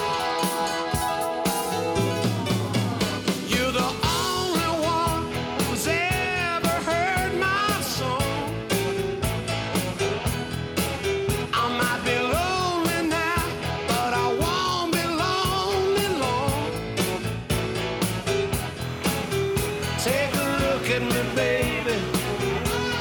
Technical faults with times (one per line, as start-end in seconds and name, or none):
18.84-23.00 timecode bleed